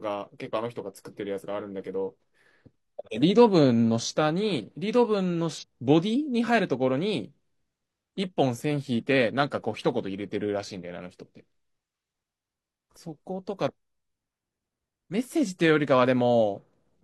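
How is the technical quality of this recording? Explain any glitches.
One glitch stands out in this speech recording. From 5.58 to 5.64 s there's damaged data in the compressed stream: the decoder misreads corrupted frames and loses sync, producing a brief garbled blip.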